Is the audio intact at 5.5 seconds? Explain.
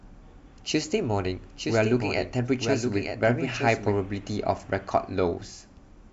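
Yes, the speech at 5.5 seconds plays through intact, with no dropout, click, distortion or other fault at that moment.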